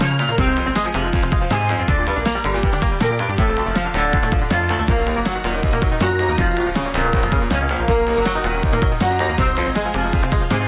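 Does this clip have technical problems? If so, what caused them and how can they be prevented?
No, there are no faults.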